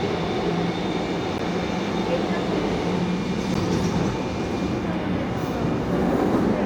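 At 1.38 s and 3.54 s, a block of digital silence drops out about 12 ms, likely from a missed 512-sample buffer. Each gap is heard as a tick or dip.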